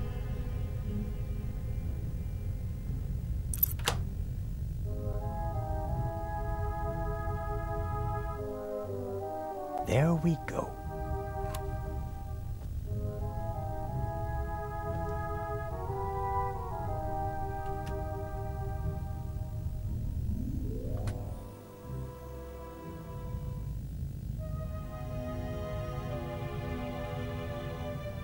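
Video or display buzz runs throughout. Screen or video cable pickup adds a 50 Hz buzz with hash and a 15.6 kHz tone, about 20 dB below the sound.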